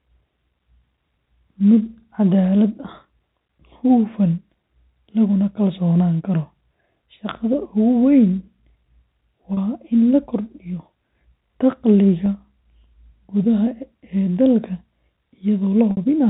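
Packet loss with pitch repetition strikes at 9.54–9.57 s, 12.26 s and 15.91–15.97 s, in gaps of 30, 10 and 60 ms, which fits 10 ms packets. The receiver loops the last pitch period, so the two shorter gaps sound like a brief buzzy hold in the telephone-band audio, while the 60 ms gap fades into silence before the speech returns with a short cross-fade. On a spectrogram this appears as frozen, evenly spaced harmonic stripes, and the waveform shows identical repeating cycles.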